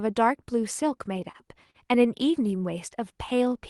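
Repeated stalls (stutter) run from 1.13 to 1.76 s. Packets reached the receiver late, so its jitter buffer ran dry five times within this span. At each gap the decoder stretched the last sound to cover it, for about 90 ms in total. The longest pause is 41 ms. Nothing is lost, but roughly a seventh of the span is filler, so the speech catches and drags in small hitches.

A jitter buffer slow-down follows from 3.00 to 3.58 s. With its reserve running low or its target delay just raised, the receiver built up a reserve by repeating single pitch periods and slivers of pause, adding 57 ms. That passage plays at about 91% speed while keeping its pitch, so sounds come out drawn out. Across the clip the highs stop near 12 kHz, which fits an Opus call path.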